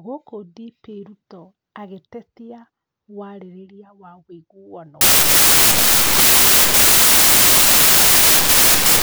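From 5.01 s to the end at 9.02 s, the speech turns into loud, harsh broadband noise. The samples are built from the wrong bytes, so each value is led by its busy low bits.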